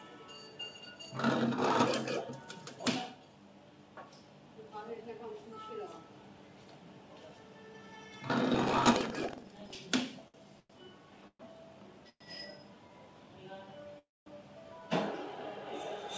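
From 8.50 to 9.77 s there's buffer tearing: the writer and the hardware reader of the ring buffer have drifted so they cross every period, leaving a small slice of each buffer holding audio about a tenth of a second old. That gives a steady 21.5 Hz rattle, which fits a 2048-sample buffer.

Next come two short stalls from late packets, at 10.28 to 10.36 s and 10.60 to 10.71 s. The jitter buffer ran dry, so the last sound got stretched for 60 ms and then 96 ms before picking up where it left off, with nothing lost.

Then three call audio freezes, at 11.27 to 11.41 s, 12.09 to 12.22 s and 13.99 to 14.28 s. Each time the sound carries on as a fading buzz and then goes quiet for 60, 50 and 220 ms before resuming, likely packets held up en route emptying the jitter buffer. Throughout, the G.722 call path leaves nothing above 8 kHz.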